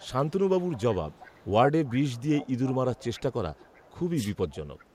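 From the start to 1.51 s there's a faint delayed copy of the speech trailing it by 377 ms, well down, around 25 dB under the direct sound. That's an echo leak: a speakerphone's echo canceller on the far end likely let part of its loudspeaker pickup through and sent it back. It returns from 1.86 to 3.99 s, a bit more present at roughly 20 dB down, and again from 4.49 to 4.86 s, quietest there, around 30 dB below.

Inside that middle stretch, from 2.99 to 3.08 s, the speech briefly sags by a few dB for roughly a tenth of a second. That's speech suppressed in double talk. With both sides active, the canceller likely couldn't tell the talker apart from the returning echo and pulled the level down on both, so you get a short dip.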